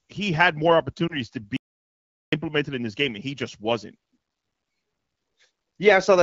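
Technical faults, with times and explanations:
1.07 to 1.19 s, lost AMR speech frame: One 20 ms frame of speech didn't make it through, so the AMR-WB decoder papered over the hole by reusing the last good pitch and vocal tract settings at reduced gain, then resumed normal decoding. That's why you get a brief dip or warble there rather than a clean gap, and the speech comes back weak or rough for a moment as the decoder recovers.
1.57 to 2.32 s, audio dropout to silence: The sound cuts out mid-flow and returns after roughly 0.76 s, with the gap fully silent and no room tone underneath. That points to the input itself going missing while recording carried on writing silence, likely from a disconnected device, a failed link or a stray mute. Whatever was said in that stretch is gone for good, and the wideband codec can't recover anything that never reached it.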